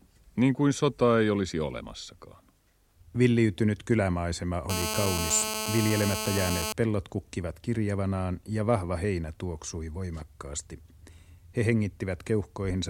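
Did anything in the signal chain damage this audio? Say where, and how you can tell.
Yes. GSM phone buzz enters at the analogue stage from 4.70 to 6.73 s, ending just before "pellot kukkivat kirjavanaan ja". A nearby phone on a call pulses at about 217 Hz, rectified into a steady rasp only about 4 dB below the speech. A spectrogram shows a harmonic comb; the waveform shows regular spikes.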